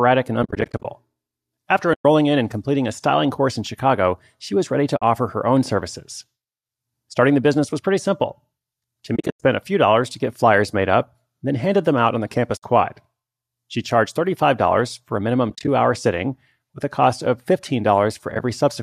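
Speech fades into soft-edged holes at 0.43–0.86, 1.94–2.05, 4.97–5.02 s (between "she was ready to" and "her own services"), 9.16–9.42, 12.57–12.63, 15.50–15.68 s (after "for a minimum") and 18.32–18.40 s. That's AAC frame loss with muting: the decoder zeroes each lost frame, so the sound dips out and back in. Several, like the first, are scattered flickers rather than one gap. The 10 ms steps fit short frames, likely from low-delay AAC.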